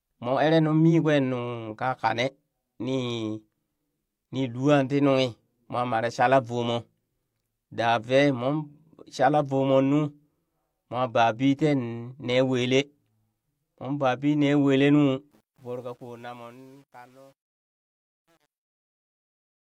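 Truncation distortion on the fade runs from 15.31 s to 19.75 s and is worst from 15.99 s onward. The fade-out, starting around 15.3 s, is kept at only 9 bits without dither, so the shrinking speech waveform collapses into coarse square steps, turning gritty toward its quiet end.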